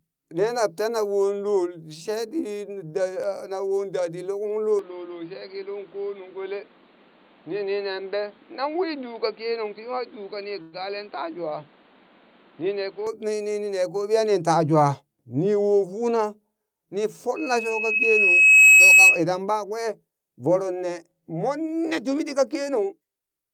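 At 4.79 s the capture path most likely switched to a poorer input device, such as a second microphone or a headset's call profile, and it stays there until 13.07 s. Nothing above 4.7 kHz gets through, so the speech turns dull and boxy. There is no gap at the changeover and the loudness stays about the same, but a faint new background noise sits well beneath the voice until the brighter sound returns at 13.07 s.

Between 10.62 and 10.75 s a call audio freeze occurs, likely because delayed packets left the receiver's jitter buffer with nothing to play. The receiver stretched the last sound it had into roughly 105 ms of buzzy, fading fill instead of silence. When the packets arrived, the speech carried on from where it had stopped, so nothing was lost, but that pause was inserted and everything after it runs about 105 ms later.

From 17.36 to 19.22 s a loudspeaker feedback squeal builds. A microphone was picking up the speaker it fed, and at 2.6 kHz the loop gain went above one. 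That single tone grows on its own over about a second and a half until it rings well above the speech as a piercing whistle, then stops at 19.22 s.

Right after "mmon netumi", from 22.38 to 23.27 s, a jitter buffer speed-up sets in. The receiver was holding more audio than it wanted and trimmed the backlog by cutting out many short pitch-period fragments in quick succession, roughly 70 ms in total. The speech plays at about 108% speed with its pitch unchanged, so this stretch sounds slightly rushed.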